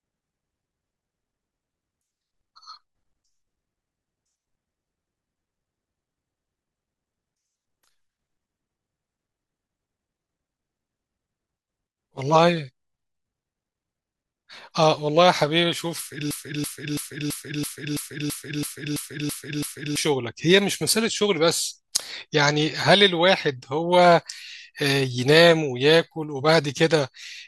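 A speech recording with a broken-record loop from 16.31 to 19.97 s: a 0.33 s fragment repeats 11 times back to back, and the speech that belonged in those seconds never arrives. The cause is likely a player or stream stall that kept resending its last buffer. Unlike echo, the repeats don't fade or blur, and unlike a speaker's own stammer, each cycle is sample-identical and cuts off at exactly the same point.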